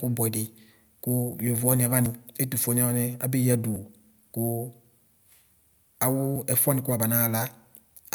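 Dropped buffers (overrun) at 2.06, 3.76 and 6.36 s break the speech with a sudden jump forward, with no silence in between. Each skip is most likely a buffer the recording software failed to read before the hardware overwrote it, so that chunk vanished and the two sides were spliced directly. The first two skips lose about 40 ms of sound each, and the last about 20 ms.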